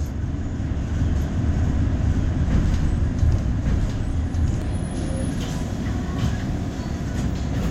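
From 1.16 s to 4.62 s a doubled audio track appears: a second copy of the sound, about as loud, trails roughly a second behind, likely from a slower capture path. Unlike an echo, it never fades and starts and stops abruptly.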